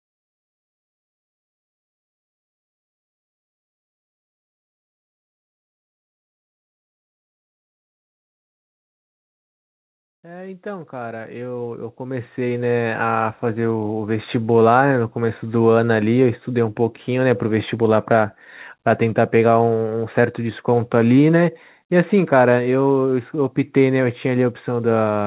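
From 10.22 s to 15.49 s the speech and the background noise behind it swell together, climbing steadily by about 17 dB over roughly five seconds rather than jumping at once. This is automatic gain rising: the automatic gain control judged the input too quiet and kept raising its gain step by step, lifting everything it receives, noise included, through the narrow band below 4 kHz that the G.711 call path carries.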